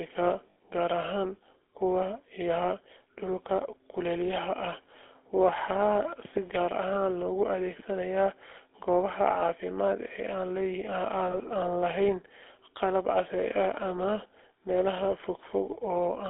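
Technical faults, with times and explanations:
Throughout: GSM full-rate codec. Speech has a buzzy, gravelly roughness, consistent with 13 kbps full rate. The line passes only 300 Hz to 3.6 kHz, so it sounds thin.
0.50 to 0.57 s and 11.32 to 11.37 s: lost GSM frames. Gaps of 60 ms, fitting three frames, and 20 ms are filled by repeating the last good frame. This produces a brief metallic ring.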